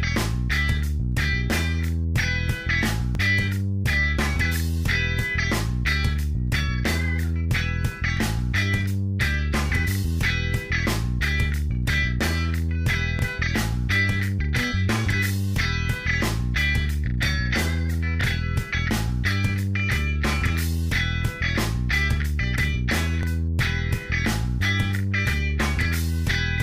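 The audio has overlapping chunks. A 20 ms piece plays twice at each join: 3.15–3.17, 8.17–8.19, 13.19–13.21, 18.21–18.23 and 23.23–23.25 s. Each join is a brief stutter. Audio handled in 5 s chunks, each starting before the last ended, causes this.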